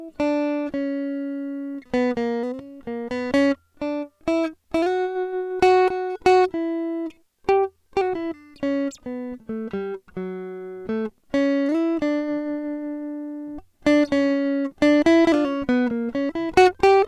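The music signal shows no audible technical faults at any point.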